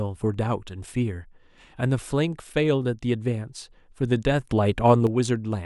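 A speech recording in which, at 4.51 s, the level abruptly steps up by about 6 dB and stays raised until 5.07 s, when it drops back just as suddenly. The background noise rises and falls in lockstep with the speech, so the whole signal, not just the talker, gets louder. This is a sudden gain jump, likely caused by a digital gain setting being applied instantly from one sample to the next instead of being ramped in smoothly.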